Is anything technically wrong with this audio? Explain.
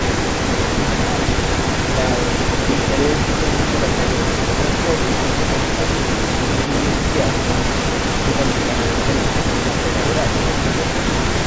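Yes. Throughout the speech, a second copy of the voice trails the original by 306 ms. It is only a few decibels quieter, so the voice sounds doubled. This is an echo leak, likely from a far-end loudspeaker whose echo canceller failed to remove what its microphone picked up and sent it back.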